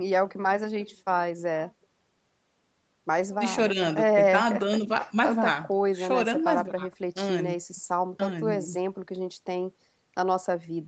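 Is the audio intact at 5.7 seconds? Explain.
Yes, the speech is intact at 5.7 seconds, with nothing breaking up the sound at that moment.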